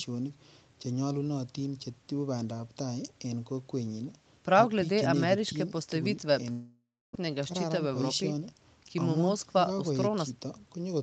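From 6.51 to 7.17 s the speech breaks off: the last sound carries on as a fading buzz, then about 270 ms of plain silence, and it resumes with roughly 600 ms simply gone. That's likely a long network dropout, with the receiver papering over the gap.

Right after, from 7.78 to 8.41 s, there's a jitter buffer speed-up. The receiver trims pitch-period slivers, about 50 ms in total, to shed the backlog, so the speech runs at about 107% speed with unchanged pitch and sounds a touch rushed.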